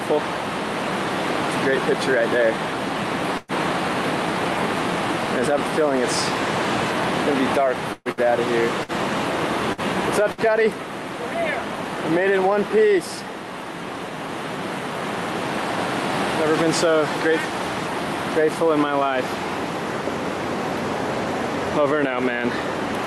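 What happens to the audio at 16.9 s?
Nothing goes wrong at 16.9 s; the audio there comes through intact, carried by a call path that sounds like it is working normally, with a top end that fits a codec band limit near 12 kHz.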